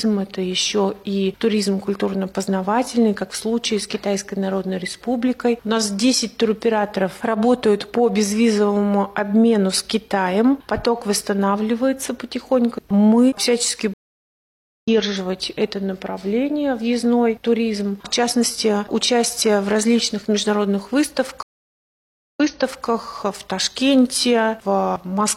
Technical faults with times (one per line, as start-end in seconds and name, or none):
13.94-14.88 stream reconnect
21.43-22.86 stream reconnect